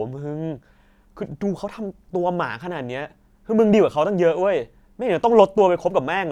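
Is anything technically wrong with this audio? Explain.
No, the speech signal shows no technical fault anywhere in the recording.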